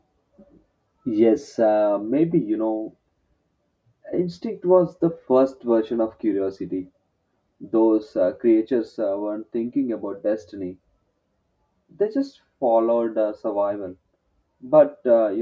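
Speech recording whose signal shows no technical faults at any point.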